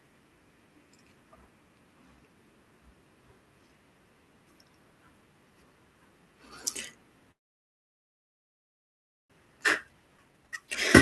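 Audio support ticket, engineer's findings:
Call audio freeze, 7.31 to 9.32 s: speech stops, near-silent for about 2 s, then resumes where it left off with nothing lost. Likely packets delayed in transit, jitter buffer ran dry, receiver's fill decayed to silence, leaving a 2 s gap.

Jitter buffer speed-up, 9.45 to 10.68 s: speech runs at 128% speed at unchanged pitch and sounds hurried. After the late packets arrived together, the buffer was over target and trimmed pitch-period slices repeatedly, around 0.4 s in total, to pull the delay back down.

Skip ahead, 10.18 to 10.20 s: abrupt forward jump in the speech with almost no gap. Roughly a second of audio is dropped, in transit or by the jitter buffer on overflow, and the two sides are spliced nearly directly.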